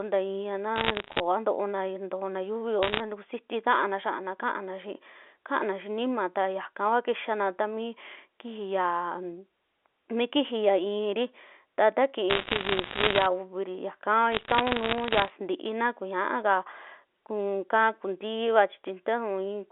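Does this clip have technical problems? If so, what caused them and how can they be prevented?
Yes, there are bit errors on a digital phone line: bursts of sharp ticks and crackle over the speech at 0.76–1.20 s, 2.83–3.00 s, 12.3–13.26 s and 14.32–15.3 s. Each flipped bit corrupts one A-law sample, and an error rate of around one to two percent turns that into crackle. A cleaner line or error-protected transport would prevent it.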